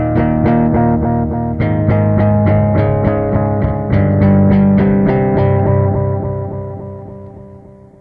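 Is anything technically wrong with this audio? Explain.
No, nothing in this audio points to a technical fault. No working path is listed to comment on, so there is nothing further to single out.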